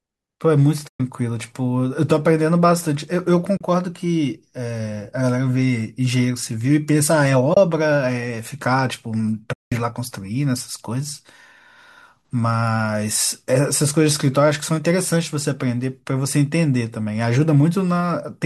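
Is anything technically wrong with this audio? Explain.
Yes. There are four short dropouts, at 0.88 to 1.00 s, 3.57 to 3.61 s, 7.54 to 7.57 s and 9.53 to 9.72 s, lasting about 120, 40, 30 and 190 ms. These are AAC frame loss with muting. The decoder zeroed the spectrum of missing frames, and the overlapping windows fade the speech down and back up at each edge. The result is a soft-edged hole. The gap lengths fit frames of about 10 ms, consistent with the low-delay AAC-ELD stream that is the likely carrier.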